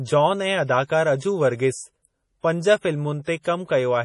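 Heavy data reduction runs through the whole speech clip, most likely MP3 compression at a very low bitrate; the damage fits something around 32 kbps. Short of bits, the encoder has cut everything above 11.2 kHz and dropped the weaker frequency lines, which flicker in and out between frames. The result is a dull top end with a watery, swirling texture, metallic chirping on s sounds, and consonant attacks that blur rather than strike cleanly.

At 3.41 to 3.45 s comes a pre-echo. A sharp attack lands late in a transform block, so the quantisation noise sized for that loud onset spreads back across the quiet stretch before it, about 38 ms of it. That is heard as a brief hiss rising just ahead of the attack, which itself arrives softened and smeared instead of crisp.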